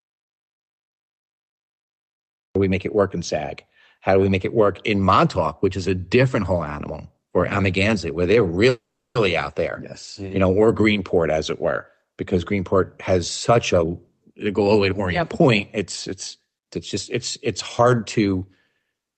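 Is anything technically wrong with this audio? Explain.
Yes. There are three kinds of fault.

From the start to 2.55 s there is an audio dropout to silence. It is already under way when the clip begins and ends just before "we make it work". The gap is silent with no room tone. The input was likely lost while recording continued, and that sound is gone.

From 8.69 to 9.17 s there is a call audio freeze. Packets likely stalled and the jitter buffer ran dry. The last sound is stretched into a brief fading buzz, then 370 ms of silence. The speech resumes where it stopped, so 460 ms is inserted and nothing is lost.

Four jitter buffer speed-ups follow. The first is 13.49 to 13.89 s at 138 percent. The second is 14.30 to 15.78 s at 106 percent, before "it's it's just it's". The third is 16.40 to 16.71 s at 111 percent, before "it's just it's". The fourth is 17.48 to 19.02 s at 108 percent. The receiver trimmed pitch-period slices to shed excess delay. 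The first burst cuts roughly 150 ms, and the later ones cut between a few tens of milliseconds and about 150 ms. The speech sounds hurried but keeps its pitch, over Opus audio band-limited to about 8 kHz.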